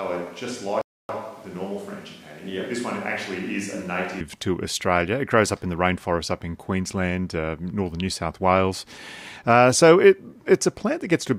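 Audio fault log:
0.00–4.20 s, switch to a distant microphone: speech starts hollow, thin and roomy, about 10 dB quieter, then snaps close; likely a far microphone replacing the close one.
0.81–1.09 s, rebuffering stall: the player ran out of audio and went silent, then resumed exactly where it stopped, adding 278 ms without losing any sound.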